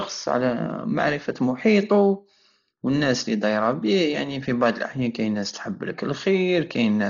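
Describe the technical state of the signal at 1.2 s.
At 1.2 s the speech is dull and band-limited, with nothing above 7 kHz. A rough, fluttering noise clings to the voiced tones. The damage is heavy and runs through the whole clip. The likely cause is Dolby Digital compression at a very low rate, fitting roughly 32 kbps. The encoder narrowed the band and gave many frequency lines no mantissa bits. The decoder then filled those gaps with dither noise.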